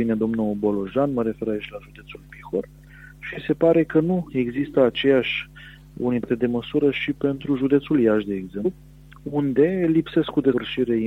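Compressed frames skipped at 6.22 to 6.25 s, 8.64 s and 10.52 s: at each point whole coded frames never reach the output, so the sound jumps forward by roughly 100, 150 and then 200 ms. The jumps are multiples of a 23.2 ms frame, several frames each time. At each join the skipped material is simply absent.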